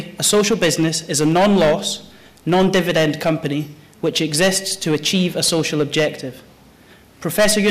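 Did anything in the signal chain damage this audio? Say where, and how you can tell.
Yes, hard clipping runs through the whole clip. The sound was driven about 7 dB past what a converter, number format or other stage could pass, so roughly 7% of samples hit that ceiling and were flattened, adding high harmonics on the peaks.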